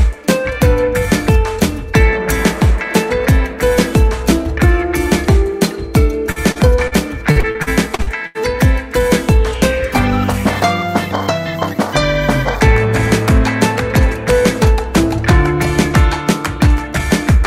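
Short concealed packet loss occurs at 6.31, 6.52 and 6.87 s. Each time, about 40 ms of audio arrived too late to decode, and the receiver bridged the hole by extending the preceding sound before blending back. Each bridge is heard as a brief smear or wobble.

From 7.31 to 8.41 s, repeated packet loss produces a robotic sound. Seven separate gaps, the longest 83 ms, remove about 320 ms in total. Concealment covers roughly 29% of the stretch, which leaves it choppy.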